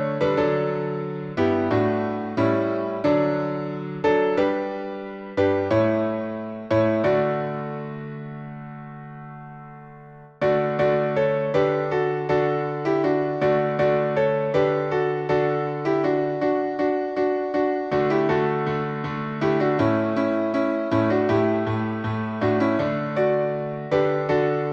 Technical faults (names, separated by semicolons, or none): none